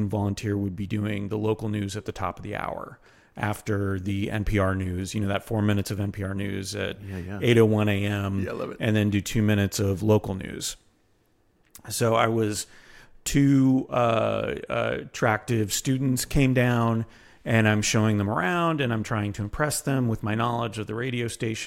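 No audible technical faults.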